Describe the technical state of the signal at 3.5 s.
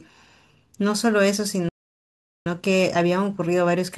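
At 3.5 s the speech is in a time-compressed catch-up, running from 2.46 s to the end: short pieces are cut and cross-faded, playing about 1.1 times fast at unchanged pitch.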